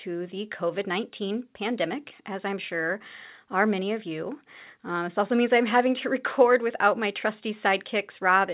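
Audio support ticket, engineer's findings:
No faults found in the speech signal, which carries the expected 4 kHz band ceiling of the A-law G.711 telephone coding at 8 kHz sampling and nothing beyond it.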